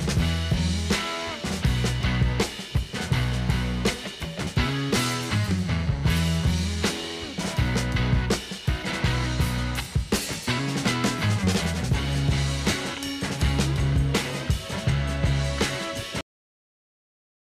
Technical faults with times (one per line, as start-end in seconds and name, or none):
16.21-17.57 cut-off end